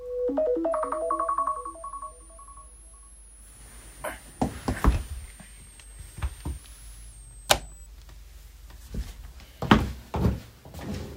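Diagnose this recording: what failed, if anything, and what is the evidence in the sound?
A switching supply whistle sits in the analogue stage, picked up from a nearby switch-mode power supply. From 0.72 s to 7.86 s a thin high tone near 10 kHz rides under the sound, roughly 25 dB down, wandering between about 7.95 kHz and 10.9 kHz as the supply's load shifts its burst rate. That drifting pitch sets it apart from mains hum or a converter idle tone, which stay low or fixed.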